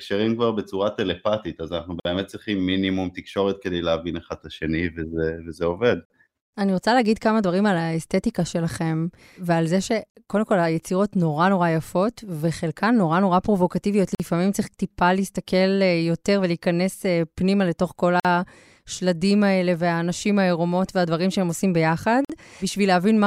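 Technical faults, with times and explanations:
2.00, 6.05, 10.10, 14.15, 18.20 and 22.25 s: gap at a join of encoded pieces. Every 4 s the speech drops out for about 50 ms, with smeared edges, and then picks up where it left off. Each separately encoded piece kept its encoder start delay and last-frame padding.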